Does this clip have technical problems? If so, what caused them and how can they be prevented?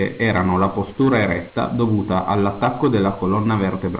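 No, nothing in this speech clip stood out as a technical problem on listening, so there is nothing here that calls for prevention.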